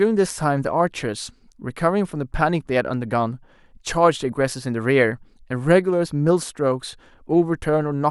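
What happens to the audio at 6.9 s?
At 6.9 s the speech carries on cleanly, with no dropout, click, distortion or other fault at that moment.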